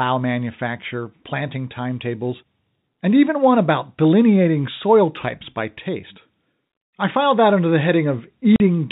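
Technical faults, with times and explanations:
8.56 to 8.60 s, packet loss filled with silence: near the very end of the speech a 40 ms hole opens where the receiver had nothing to play and inserted plain silence instead of concealing the gap. The length suggests two consecutive lost packets of 20 ms each. Because the sound stops and restarts abruptly, the gap has hard edges, while the surrounding G.711 telephone coding keeps its usual narrow band below 4 kHz.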